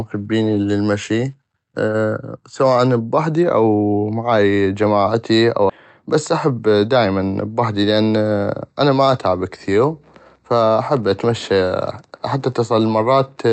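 A speech clip carried over a call path whose Opus coding, which fits a 48 kbps setting, leaves the high frequencies cut off above 8 kHz. At 5.7 s, right after "بحدي او معاي جماعتي", the audio jumps forward with no gap, a skip ahead in which roughly 0.7 s of speech is gone and the two sides are joined directly. That stretch was dropped in transit or by an overflowing jitter buffer, pulling the delay down. From 6.15 to 7.19 s, ending just before "بحدي لان", the speech runs hurried at 109% speed with unchanged pitch. This is a jitter buffer speed-up, in which the receiver trimmed about a tenth of a second in short pitch-period pieces to shrink its excess delay.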